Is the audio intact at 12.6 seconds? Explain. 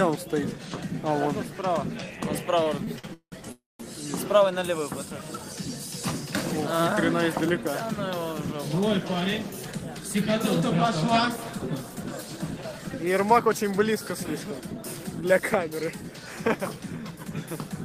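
No. A jitter buffer speed-up runs from 10.60 to 17.68 s. Short pitch-period pieces are cut repeatedly, about 0.4 s in all, so the sound plays 5% faster at unchanged pitch.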